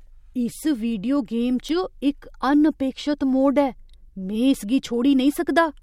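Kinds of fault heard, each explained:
Bit error spike: a single flipped bit throws one or two samples off by a power of two before they snap back, so you get a bright, full-band tick. Here there's one just after "वीडियो गेम" at 1.69 s, peaking around -14 dBFS, and a softer one at 4.54 s, around -20 dBFS.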